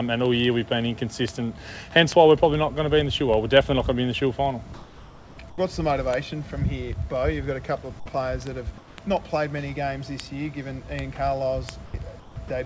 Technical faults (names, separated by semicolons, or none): word clock ticks; comfort noise in place of the background; sound dropped by the voice detector